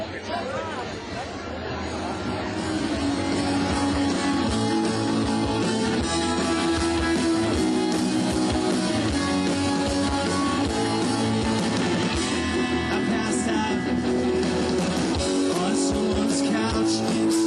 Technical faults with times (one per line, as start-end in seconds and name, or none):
0.00-17.47 gain pumping